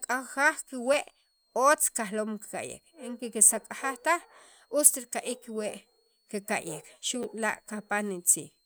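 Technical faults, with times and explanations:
0.94 s, 3.49 s and 7.23–7.25 s, repeated buffer: each is a brief click or buzzy tick in the speech, with the third slightly longer. A tiny slice of sound plays once more at 0.94 s and 3.49 s, and twice more at 7.23 s, with a hard join at every repeat. The slice length fits a 10 ms buffer that the playback device replayed when fresh audio arrived late. Practically no speech is skipped; the timeline is simply stretched.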